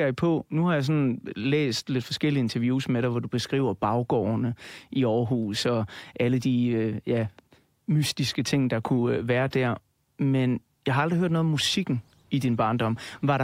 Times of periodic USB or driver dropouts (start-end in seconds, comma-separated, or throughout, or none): none